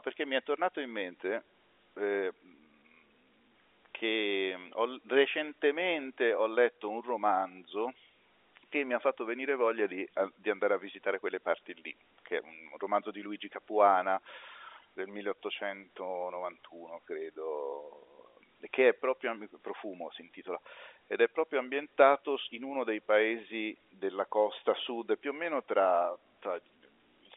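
No technical faults are audible.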